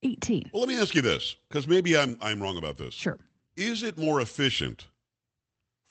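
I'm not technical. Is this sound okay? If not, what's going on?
Yes, nothing stood out on listening to this speech recording, which sounds like it came through an ordinary internet call connection.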